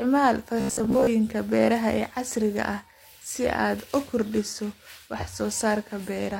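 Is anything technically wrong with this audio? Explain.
Yes. Robotic sound from repeated short buffers, 0.61 to 1.07 s, before "beeraha ee casriga ah": a 15 ms slice was likely replayed over skipped speech, imposing a metallic 66.7 Hz buzz.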